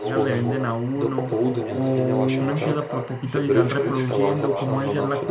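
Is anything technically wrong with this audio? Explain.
Yes, two faults run through the whole clip.

Timecode bleed is present from start to finish. Linear timecode from a nearby track or cable has leaked into the speech path. Its square wave flips between pitches around 1 kHz and 2 kHz, about 20 dB below the speech, and repeats at 24 frames per second. It sounds like a steady chirping warble behind the speech. A plain test tone or whine would hold one pitch, but this has a rhythmic two-pitch texture with no gaps.

Echo with no canceller also lasts the whole clip. The far end plays the call through a loudspeaker, its microphone picks it up, and nothing removes it, so the talker's own voice returns after the network round trip. Each phrase is shadowed by a thinner copy about 6 dB quieter and roughly 300 ms late. That delay is far too long for room reverberation, which smears sound rather than repeating it. 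The copy also has the call path's dull, band-limited tone, with nothing above 4 kHz, which fits G.711 A-law at 64 kbps.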